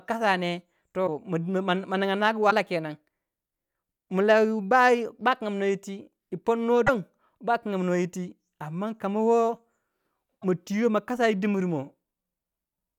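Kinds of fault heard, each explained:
broken MP3 bit reservoir: four brief glitches of about 30 ms, at 1.06, 2.50, 6.86 and 10.41 s, where the speech skips ahead. The likely cause is dropped frames whose successors borrow reservoir bytes from the wrong frame. Unlike a simple click, each break spans roughly one 26 ms frame.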